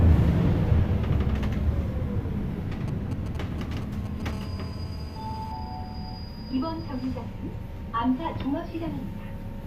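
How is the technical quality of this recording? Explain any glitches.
Two bursts of mobile-phone interference mar the recording, back to back in the middle.

From 2.88 to 4.31 s, GSM signalling bursts: a nearby 2G phone's intermittent radio pulses get rectified, giving galloping ticks and short 217 Hz buzzes roughly 15 dB down, visible as clustered vertical stripes.

From 4.33 to 5.52 s, GSM phone buzz: continuous 217 Hz call-mode bursts rectify into a raspy buzz about 21 dB below the signal, drawn as evenly spaced harmonic lines.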